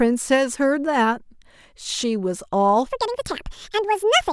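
From 2.86 s to the end, a section at the wrong speed plays 1.76 times too fast, likely from a clock mismatch. The speech turns hurried and about ten semitones higher.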